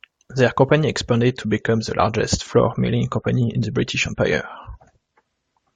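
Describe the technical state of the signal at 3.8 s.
At 3.8 s the audio sits inside an adaptive stream at a lower bitrate, from 1.28 s to the end. Nothing remains above 11.4 kHz, and artefacts rise, consistent with a drop from 96 to 32 kbit/s. Unlike rebuffering, the switch is sudden with no gap.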